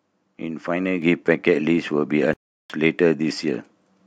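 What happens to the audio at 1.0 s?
At 1.02 s the microphone volume is stepped up: the call software raises the input gain by about 5 dB at once, so speech and background jump louder together.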